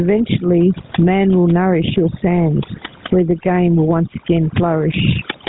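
Overdone noise removal runs throughout this speech recording: bands near the noise estimate are cut almost to nothing, leaving a lowered background that breaks up into twinkling specks. Gain pumping is also present throughout, with the gain swinging by around 15 dB and loud and soft parts squashed closer in level, likely from excessive input gain being pulled down by a fast limiter. GSM full-rate codec damage is plainly audible across the whole clip, with nothing above 3.9 kHz and a buzzy, gravelly roughness, which fits the 13 kbps full-rate GSM codec's pulse-excited vocal-tract model. The room noise, about 44 dB below the speech, is what the noise reduction was working against.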